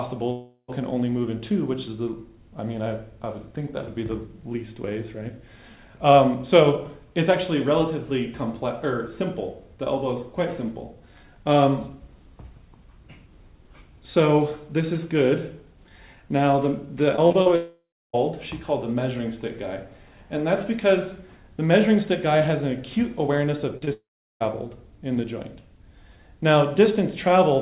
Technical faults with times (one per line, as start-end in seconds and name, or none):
0.32-0.70 long network dropout
17.16-17.48 repeated packet loss (robotic sound)
17.56-18.15 long network dropout
23.77-23.89 short concealed packet loss
23.93-24.42 long network dropout